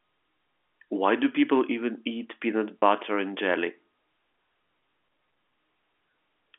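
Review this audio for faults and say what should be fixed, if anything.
At 2.79 to 2.82 s the speech briefly holds and turns buzzy for about 30 ms, a short frozen tone where the sound should keep moving. That is packet loss with pitch repetition: a gap the length of a single lost packet was bridged by repeating the last pitch period. The receiver's concealment kept the gap from sounding like a click or a dropout. The telephone band of the G.711 line is heard alongside it. Adding a jitter buffer with forward error correction or redundant packets would prevent the gap from reaching the listener.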